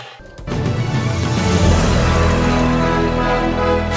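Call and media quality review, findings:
No faults found on listening review. Nothing to escalate for this capture.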